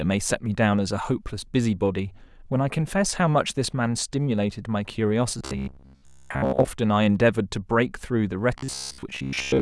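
Speech with robotic sound from repeated short buffers at 5.39–6.68 s and 8.58–9.61 s. A rigid 67 Hz buzz replaces most of it, likely from a 15 ms buffer looping.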